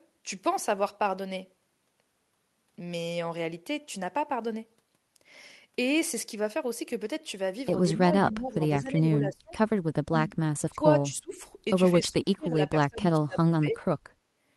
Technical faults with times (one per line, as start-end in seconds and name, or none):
7.97-9.53 speech suppressed in double talk
9.81-10.30 speech suppressed in double talk
10.70-11.35 speech suppressed in double talk
11.95-13.83 speech suppressed in double talk